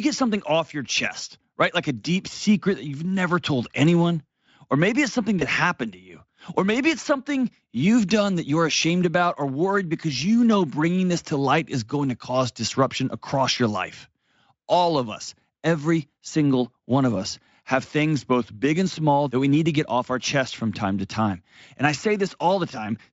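A brief smear that fades sits between "maybe it's something" and "happened to you", from 5.39 to 5.43 s. This is VoIP packet loss concealed by the Speex decoder: a gap of about 20 ms, which fits one lost frame, was filled by extending the preceding pitch and filter, and the effect lingered a moment after packets returned.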